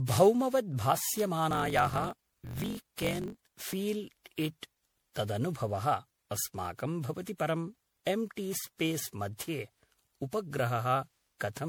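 The whole clip has a swirly, hollow, smeared quality, and consonant attacks blur. That is generation loss, most likely from being run through MP3 around ten times, each pass requantising on a shifted frame grid so the damage piles up beyond what something like 96 kbit/s alone would do.

From 1.49 to 3.74 s there's a block size mismatch (truncated): a buzz at 46.9 Hz, and the speech rushes along about 1.12 times faster at roughly normal pitch. Each block's tail is being dropped, which fits a stage reading 1024-sample blocks from a longer writer.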